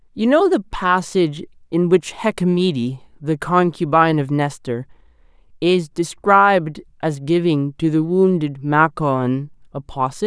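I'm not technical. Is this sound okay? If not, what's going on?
Yes, this speech recording sounds fine. Nothing in it points to a technical problem you'd need to worry about.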